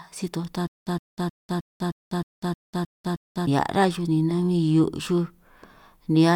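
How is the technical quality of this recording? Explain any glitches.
The recording has one clear glitch, a stutter with silent gaps, from 0.67 to 3.47 s in the speech, right after "si toj" and before "rá xuj ni". A 114 ms fragment repeats nine times, each followed by about 197 ms of dead silence, giving an even 311 ms cycle. This is likely a stalled stream replaying its last buffered fragment on each retry before running dry. The speech that belonged there is lost. A waveform shows identical blocks separated by flat near-silent gaps; a spectrogram shows a repeating stripe pattern with blank columns between.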